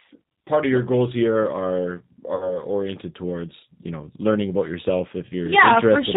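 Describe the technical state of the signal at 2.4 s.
VoIP packet loss concealed by the speech codec covers 2.35 to 2.58 s. About 50 ms of audio is missing, which fits five lost 10 ms frames. The decoder extends the last pitch and filter with falling gain, so speech becomes a fading buzzy tone or coloured noise and stays weak or distorted briefly after packets resume.

Throughout, and here too, the G.729 codec is plainly audible, consistent with G.729A at 8 kbit/s. Speech is rebuilt from a vocal tract filter, a pitch predictor and a few pulses per frame, so nothing above 4 kHz passes and the voice sounds rough and synthetic.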